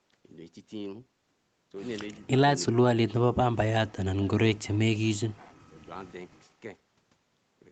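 A speech clip where an echo canceller likely mistook the talker for loudspeaker echo during double talk. The speech suppressed in double talk dips briefly at 2.19 to 2.35 s, then nearly vanishes, roughly 40 dB down, at 2.67 to 3.18, 4.31 to 5.02 and 5.34 to 5.88 s.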